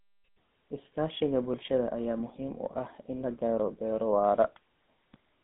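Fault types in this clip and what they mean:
GSM full-rate codec: The speech passes through a vocal-tract model driven by regular pulses, which leaves a plainly audible buzzy, gravelly roughness consistent with 13 kbps full-rate coding. A spectrogram shows energy confined to about 200 Hz to 3.6 kHz, with nothing above 3.8 kHz.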